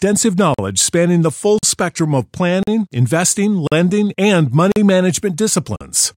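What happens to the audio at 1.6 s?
At 1.59 to 1.63 s, just after "spanning the full" and before "spectrum of planning planning", there is a gap between chunks: a 44 ms silent hole with abrupt edges where one roughly one-second block of audio ends and the next starts late. Unlike a dropout, nothing is missing; the speech picks up exactly where it stopped, so the words are intact but pushed apart by a clean, hard-edged pause.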